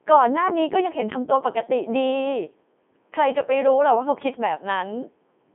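Robotic, buzzy speech runs throughout, band-limited to 200 Hz to 3.5 kHz with nothing above 3.7 kHz. This is heavy Codec 2 vocoder damage: the decoder rebuilds the voice from sine waves using only pitch, voicing, energy and envelope, consistent with a 3.2 kbit/s mode.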